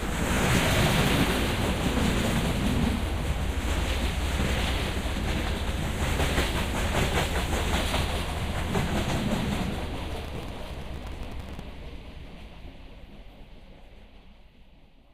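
From 0.35 to 0.60 s, and again from 10.1 to 11.6 s, processor overload crackle tears through the sound. The processor missed many tiny buffer deadlines in a row, and stale audio was replayed each time. The gritty, rapid texture points to buffers of around 5 ms.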